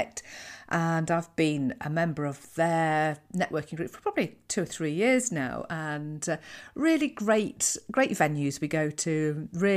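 Nothing is technically wrong with this speech recording.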